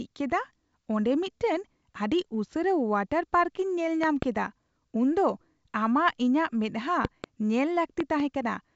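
Loud pops hit this speech recording at 4.04–4.25 s, 7.05–7.26 s and 8.00–8.22 s, each a double pop about 15 dB above the speech, likely from a connector, switch or static discharge injecting voltage spikes. The audio runs through G.722 wideband telephone coding, topping out near 7.7 kHz.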